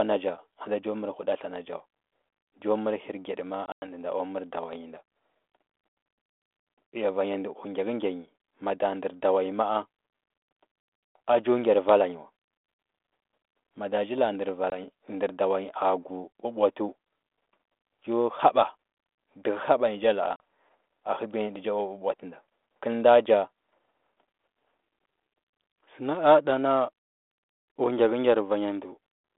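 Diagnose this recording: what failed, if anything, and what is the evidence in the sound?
The network stage is at fault, with packet loss on an ADPCM call. Around 3.66 to 3.93 s, roughly 120 ms of sound drops to hard-edged silence across about 160 ms, the longest hole 100 ms, so about seven packets. There's a single 20 ms dropout at 14.7 s just before "ndər dawa nyi a", and a 40 ms one at 20.36 s. After each gap the decoder's adaptive predictor and step size are out of step with the sender's, so the sound comes back slightly distorted, settling within tens of milliseconds. The codec underneath sounds like 32 kbit/s G.726 on a 250 Hz to 3.5 kHz line.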